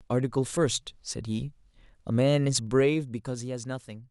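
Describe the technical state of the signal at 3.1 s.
Zipper noise runs from 2.6 to 3.56 s, covering 3.1 s: the level falls by about 10 dB in unsmoothed 2 dB jumps, roughly seven per second, and each jump leaves a small click, so a ticking rasp rides on the speech as it fades.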